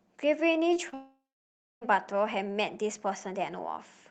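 Short concealed packet loss hits twice, at 0.73 to 0.77 s and 0.89 to 0.94 s: about 20 ms of audio arrived too late, and the receiver's patch leaves a brief smeared wobble. Immediately after, from 0.94 to 1.83 s, comes what is likely a long network dropout. The decoder stretches the last sound into a fading buzz or hiss, then holds roughly 0.6 s of silence before real audio resumes with nearly 0.9 s lost.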